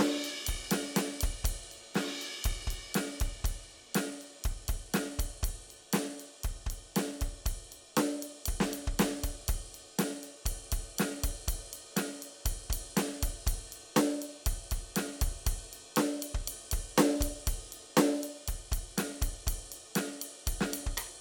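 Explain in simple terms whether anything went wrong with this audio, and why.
Nothing went wrong here; the music just carries on as it should, with no glitches, dropouts or odd noises along the way.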